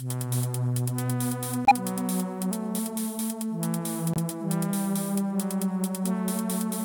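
At 1.65 s the music drops into silence for about 67 ms. At 4.14 s a shorter 32 ms hole follows. Both are corrupt frame mutes. The decoder rejected damaged compressed frames, which fits two frames and then one. The player filled each gap with silence. Each gap cuts in abruptly, and the timing stays intact.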